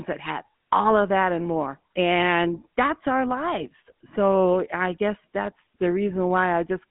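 Throughout the speech, GSM full-rate codec damage is plainly audible. The coder models the vocal tract and excites it with a sparse regular pulse train, which gives voicing a buzzy, gravelly roughness consistent with the 13 kbps full-rate scheme. The band runs roughly 150 Hz to 3.4 kHz, with nothing above 3.8 kHz.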